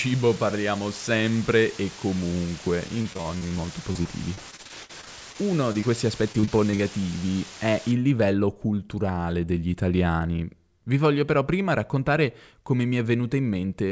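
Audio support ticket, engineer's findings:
Low bit depth with dither, 0.00 to 7.92 s. Constant even hiss with no distortion, about 15 dB below the speech. Only about 5 bits in use; dither turns the rounding error into steady white noise. Likely capture or conversion stage.

Repeated packet loss (robotic sound) at 2.88 to 3.53 s, 3.93 to 5.36 s and 6.32 to 7.04 s. Choppy speech with pieces missing. Repeated network losses, each gap patched by extending the last sound. Worst gap near 57 ms. Jitter buffer concealment.

Short concealed packet loss at 5.72 to 5.76 s and 5.80 to 5.84 s. Brief smear or wobble each time. About 20 ms of audio missing in each, filled by continuing the preceding sound, then blended back. Network loss, decoder concealment.

Jitter buffer speed-up, 8.88 to 9.18 s. Speech runs hurried at unchanged pitch, about 112% speed. Receiver trimmed short pitch-period pieces, about 50 ms in total, to shrink excess buffered delay. 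Jitter buffer.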